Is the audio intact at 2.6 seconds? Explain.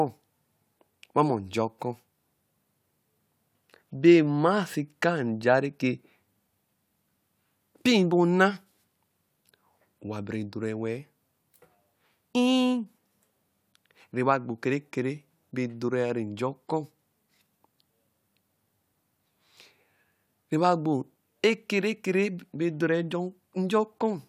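Yes, the speech plays through cleanly at 2.6 seconds, with no dropout, glitch or other fault at that moment.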